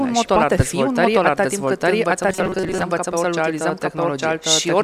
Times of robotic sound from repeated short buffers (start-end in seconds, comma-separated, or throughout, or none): 2.29-2.85